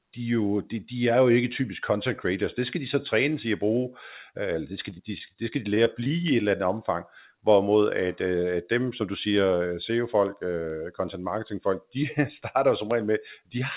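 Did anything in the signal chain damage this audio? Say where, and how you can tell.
Yes. At the digital interconnect, word clock ticks run from 0.53 s to the end, roughly every 0.4 s: an unlocked receiver slips one sample per tick, suggesting a clock mismatch near 50 ppm.

On the network, repeated packet loss makes the speech choppy and robotic from 4.90 to 5.36 s and 5.74 to 6.11 s. Short gaps, up to 24 ms, are patched by extending prior sound.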